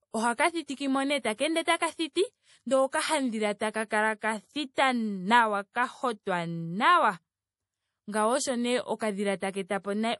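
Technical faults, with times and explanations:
Throughout, low-bitrate audio saved at a high bitrate: the speech was likely squeezed through a low-bitrate MP3 encoder, around 48 kbit/s, and then re-saved as a much larger MP3, which fits a 256 kbit/s file. The second pass cannot put back what the first discarded, so the spectrum stops sharply at about 11.5 kHz, leaving the speech dull and lacking air, and the coding artefacts of the first encoding remain audible.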